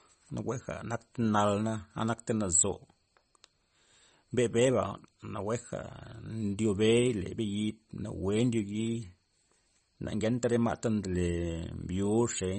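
Throughout, the speech loses all treble above 8.3 kHz and sounds watery. This is likely MP3 compression, fitting a bitrate near 34 kbps.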